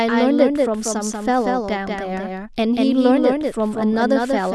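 A doubled audio track runs throughout: a second copy of the speech trails about a fifth of a second behind, roughly 5 dB quieter, likely from a slower capture path.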